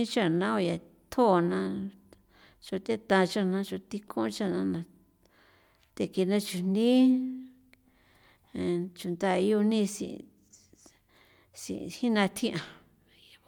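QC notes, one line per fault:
No faults were found in this speech clip. Nothing in it needs to be logged.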